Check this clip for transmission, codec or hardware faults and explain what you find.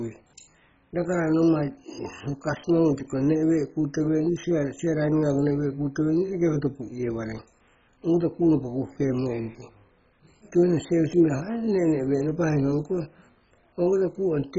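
One codec fault runs through the whole speech clip: heavy damage that sounds like MP2 compression at a very low rate. The speech is dull and gurgling, with nothing above 7.5 kHz. This fits Layer II starving its upper sub-bands at roughly 16 kbps. A spectrogram would show a hard ceiling with flickering band blocks.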